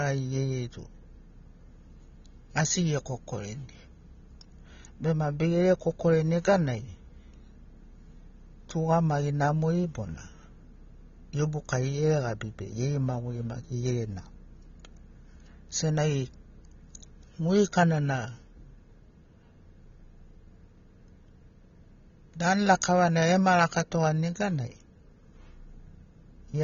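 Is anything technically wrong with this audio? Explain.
Yes. Throughout the speech there is plainly audible AAC compression damage, most likely from AAC-LC encoding at a low rate, which fits a bitrate around 24 kbps. Nothing is present above 7 kHz, so the sound is dull and muffled, with a smeared, warbling texture on sustained sounds and fizzy sibilants. The encoder lowered its cut-off and quantised the frequency content coarsely. On a spectrogram, energy stops at a flat ceiling at 7 kHz.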